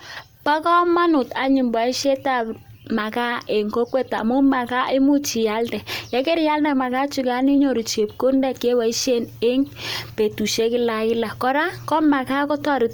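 Speech runs the whole way through with a grainy, breathy edge in the upper range, where the top end sounds smeared and filled in rather than cleanly resolved. The damage is plainly audible from start to finish. That's most likely Bluetooth LC3 compression, the LE Audio codec, which throws away fine high-frequency detail and papers over it with noise. The texture fits 10 ms frames at a moderate rate of around 48 kbps. Bandwidth isn't the issue, since content reaches up to about 20.2 kHz.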